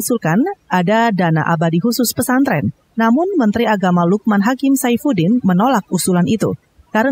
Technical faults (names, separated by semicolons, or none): overdone noise removal